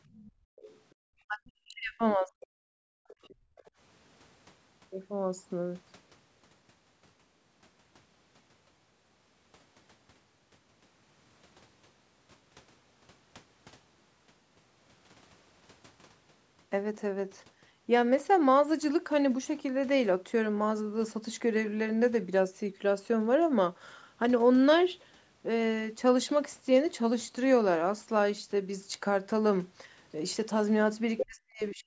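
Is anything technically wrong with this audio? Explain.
Yes, there are three kinds of echo-canceller fault, grouped at the start and the very end of the speech.

Other side's voice leaking through: from 0.08 to 0.93 s and 3.08 to 3.7 s, a second voice sits far beneath the talker. From 31.17 to 31.75 s it is nearly as loud as the talker. This is likely loudspeaker playback that the canceller failed to subtract from the microphone. Unlike reverberation, it is a different voice with its own timing, not a smeared copy of the talker.

Background gated by the echo canceller: from 0.32 to 1.0 s the room tone falls away by up to about 40 dB, and from 2.93 to 3.57 s by up to about 35 dB. It is gone for roughly 0.3 s and 0.4 s in total respectively and then returns. The canceller is clamping the microphone while the loudspeaker plays. It differs from the double-talk loss because the talker is not speaking over it. 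Only the ambient bed vanishes, which makes the pauses sound dead and then abruptly live again.

Speech suppressed in double talk: from 1.28 to 2.65 s the talker's own voice dips very deeply, for about a second in all. From 31.24 s to the end it does the same for about half a second, overlapping the loud leak. Both sides were likely talking at once, and the canceller turned everything down because it could not separate the talker from the echo. Unlike network dropouts, the cuts follow the other side's speech rather than landing at random.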